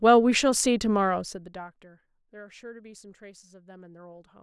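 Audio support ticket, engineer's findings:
Zipper noise, 1.06 to 1.96 s: fine ticking under the speech while the level drops by about 20 dB. Steps at roughly 100 per second, which points to a gain stage updating once per buffer, about every 10 ms, with no ramp. Each jump clicks. Check smoothing on this gain path.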